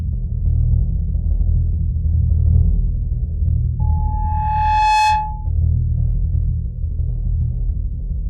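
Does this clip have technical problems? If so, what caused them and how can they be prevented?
Yes. From 3.79 s to 5.50 s a loudspeaker feedback squeal rises out of the music: a single pure tone at 856 Hz that swells over about a second to around 5 dB above the music. The microphone is hearing its own loudspeaker, and at that frequency the loop gain passes one. A held instrument tone would start at full strength; this one grows by itself. Keep microphones away from loudspeakers and notch 856 Hz.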